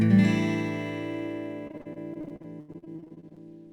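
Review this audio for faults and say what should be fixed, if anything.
From 1.67 s to 3.38 s the sound turns choppy and robotic, with pieces dropping out in quick succession. This is repeated packet loss: over twenty short holes, the longest 82 ms, are each patched by extending the preceding sound, so about a third of that stretch is filler. To prevent it, stabilise the network path or enlarge the jitter buffer so late packets still arrive in time.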